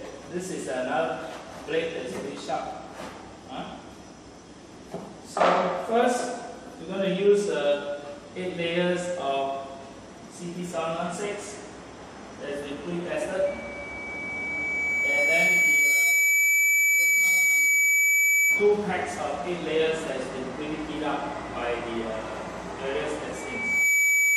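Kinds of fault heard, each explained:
Loudspeaker feedback squeal, 13.46 to 18.78 s and again from 23.35 s to the end: a microphone is picking up the loudspeaker it drives, and at 2.3 kHz the loop gain rises above one, so that frequency keeps reinforcing itself. The first time, a single 2.3 kHz tone swells over roughly three seconds into a squeal around 10 dB above the rest of the sound. The second time, it builds in about half a second.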